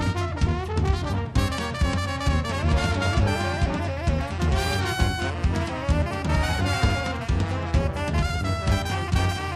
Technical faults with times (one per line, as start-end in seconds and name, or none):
none